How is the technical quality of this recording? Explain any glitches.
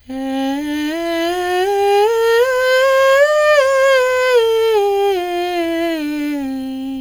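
No glitches turn up in this music recording, and the signal holds together without any dropouts, distortion or interruptions that point to a technical fault.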